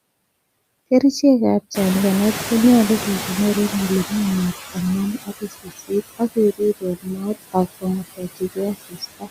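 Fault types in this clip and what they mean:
Noise suppressor artifacts: The suppressor keeps estimating which frequency bands hold steady noise and turns those bands down frame by frame, here by about 18 dB across the whole clip. The room noise therefore sinks in the gaps and swells back under the speech rather than sitting at a constant level.
Noise suppressor catching up: Around 1.5 s the room noise jumps by about 20 dB, ending up only about 12 dB below the speech. The suppressor's noise estimate lags behind that jump. From 1.74 s to 5.24 s the louder background comes through with less reduction, then fades as the estimate adapts over about 3.5 s. The cut settles at about 14 dB.
Speech cut by the noise suppressor: The suppressor treats parts of the speech as noise and pulls them down with it, by about 19 to 21 dB. This happens at 5.25–5.91 s, 6.8–7.26 s, 7.81–8.58 s, 8.74–9.03 s and 9.19–9.29 s. 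In each span, a fraction of a second of soft consonants, word endings or quieter syllables sounds swallowed or faint.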